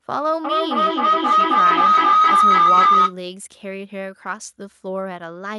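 A speech recording with a feedback howl from 0.44 s to 3.17 s. Two devices in the same room share the call. Sound leaves one loudspeaker, enters the other microphone, and returns louder each time. The repeats narrow to a tone around 1.5 kHz. It pulses roughly every 0.3 s, the loop's round-trip delay. At its loudest it sits about 11 dB above the speech. It stops at 3.17 s.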